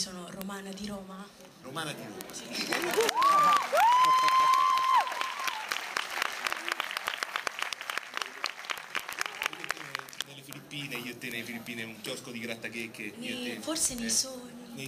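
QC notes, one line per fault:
0.11–14.86 s, word clock ticks: a steady rattle of sharp ticks of uneven strength, about every 40 ms, some few hundred in all. The receiving device is running on its own clock, roughly 500 ppm off the sender's, so the two drift past each other and one sample is dropped or repeated each time, with neighbouring samples misread. Unlike random crackle or dropout clicks, the ticks keep an even spacing throughout.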